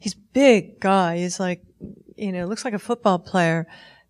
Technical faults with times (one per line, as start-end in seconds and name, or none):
none